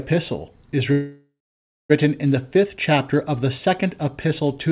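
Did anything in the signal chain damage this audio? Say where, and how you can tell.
Yes. A call audio freeze runs from 0.92 s to 1.92 s, in the network and jitter-buffer stage of the call path. The speech stops and the receiver extends the last sound as a buzz or hiss that fades into roughly half a second of silence, then resumes where it left off. About 975 ms of gap is inserted and nothing is lost. The likely cause is packets stalling in transit until the jitter buffer ran dry, with the G.711 band limit at 4 kHz audible throughout.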